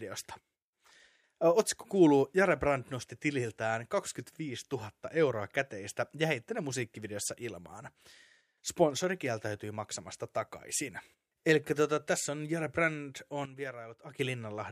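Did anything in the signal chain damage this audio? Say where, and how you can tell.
Yes. A sudden gain jump from 13.46 s to 14.19 s drops the speech and background noise together by about 12 dB, then restores them. The waveform envelope steps down and back abruptly, and the spectrogram dims uniformly across all frequencies. The likely cause is a digital gain or bit-shift change applied without a ramp in the processing stage.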